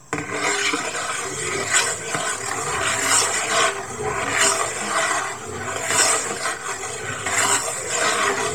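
An everyday sound recording carrying Bluetooth LC3 compression from start to finish, likely from a low-bitrate LE Audio link. Much of the upper spectrum has been zeroed and refilled with noise, leaving a heavily grainy, breathy top end, which fits a bitrate near 32 kbps with 10 ms frames.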